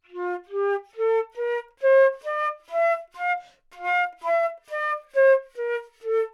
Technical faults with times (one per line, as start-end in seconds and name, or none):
none